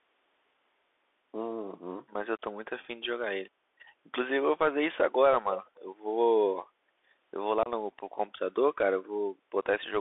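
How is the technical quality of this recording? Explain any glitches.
The quality is limited, with a couple of brief glitches on top.

Throughout, the speech has the sound of the Bluetooth CVSD headset codec, which fits a 64 kbps CVSD link. The line is squeezed into roughly 300 Hz to 3.6 kHz, and the one-bit delta coding struggles with fast changes, leaving s sounds scratchy and a grainy hiss underneath the speech.

From 5.76 to 5.85 s there's a faint echo leak: a very quiet copy of the speech comes back about 286 ms late. The likely cause is a loudspeaker on the far end whose echo canceller let a scrap of its own pickup slip back into the call.

At 7.63 to 7.69 s there's unconcealed Bluetooth headset packet loss, a 26 ms hole with hard edges. It sounds like a handful of short packets between headset and phone went missing, and nothing was patched in to fill the gap.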